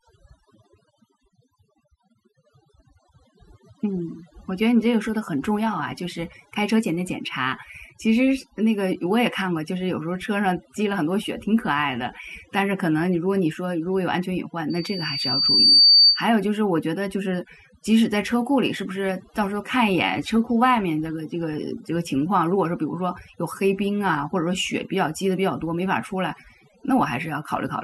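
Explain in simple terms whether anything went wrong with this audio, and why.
The whole clip has overdone noise removal: the cleanup was set too hard, so the background drops and breaks up into twinkly specks. From 14.70 to 16.26 s there's a loudspeaker feedback squeal. The mic is catching its own speaker, so a 4.6 kHz tone swells over about a second until it's louder than the speech.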